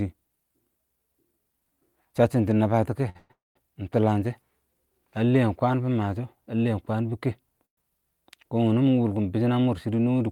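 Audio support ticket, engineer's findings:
Short stall from a late packet, 3.09 to 3.17 s. Speech held about 56 ms with a slight buzz or dip. Jitter buffer ran dry. Receiver stretched the last sound until the packet landed. Playback resumed in place. Nothing lost. Output delay grew 56 ms.

Call audio freeze, directly following, 3.17 to 3.57 s, with "ɪng tʊləng shɛ" just after 3.31 s. First 125 ms is a fading buzz or hiss. The next 239 ms includes 180 ms of silence. Later freeze at 7.65 to 7.79 s, after "lɛɛn kwəən bɪ kɛ": 118 ms, 100 ms silent. Likely network packet hold-up emptying the jitter buffer. Audio continues where it stopped. Gaps inserted. Nothing missing.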